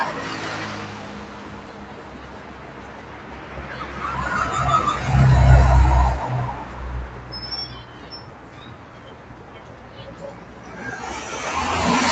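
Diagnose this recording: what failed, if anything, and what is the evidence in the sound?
Call processing: a noise suppressor applied to sounds pumps throughout, with sustained tones and tails sinking by about 15 dB while attacks pass, unlike compressor pumping, which follows level.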